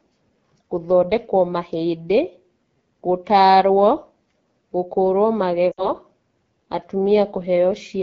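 A speech clip carried through the AMR wideband (HD Voice) codec at one of its lowest rates, with a sound that fits roughly 8.85 kbit/s. Speech is plainly rough and raspy because the pulse-driven vocal tract model is starved of bits, and the band from 6.4 to 7 kHz is only shaped noise. From 5.71 to 5.91 s, lost AMR speech frames cause a short gap, consistent with about 60 ms (three 20 ms frames) failing their checksum. The decoder repeats the last pitch and vocal tract settings at falling gain, so the sound drops to near silence within two frames before returning briefly weak or rough.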